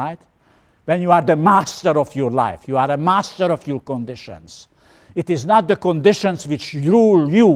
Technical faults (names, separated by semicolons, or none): none